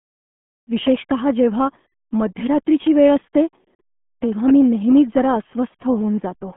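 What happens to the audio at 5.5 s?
At 5.5 s the speech is still passing through the RealAudio 14.4 codec, as it does for the whole clip. This dial-up era coder squeezes the signal into a narrow telephone-style band of roughly 150 Hz to 3.5 kHz, with nothing above 3.8 kHz, and the heavy damage points to a rate around 8 kbit/s. The result is muffled, gargling speech.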